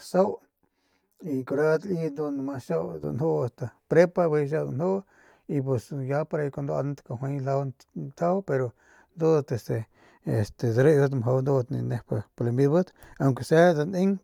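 From 0.00 to 3.04 s the speech has a channel delay (comb filtering): one channel arrives roughly 10 ms after the other, and when the two are summed to mono the shared content cancels at evenly spaced frequencies, the first notch near 50 Hz. The result is hollow and phasey. Unlike flanging, the notches stay fixed rather than sweeping, and unlike room reverb there is no audible tail after each sound.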